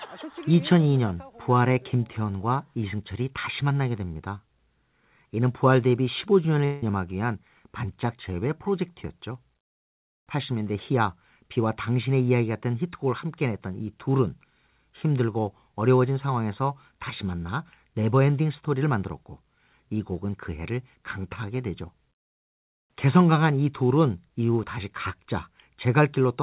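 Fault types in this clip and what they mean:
Long network dropout: From 6.65 to 6.83 s the speech breaks off for about 170 ms. A fading buzz drawn from the last sound fills the gap, with no true silence. Speech then resumes without that part. The likely cause is lost packets.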